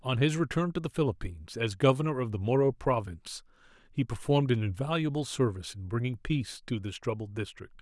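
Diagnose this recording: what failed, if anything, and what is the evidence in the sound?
Nothing failed, and the sound holds no evidence of a fault at any stage of the chain.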